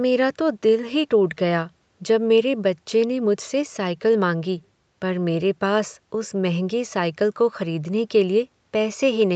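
No technical faults can be heard in this speech.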